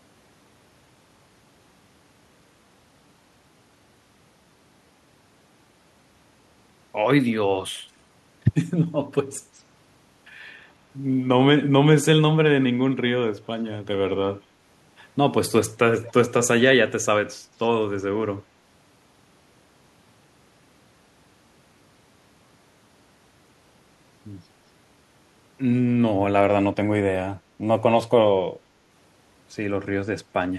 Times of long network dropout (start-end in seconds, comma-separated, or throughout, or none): none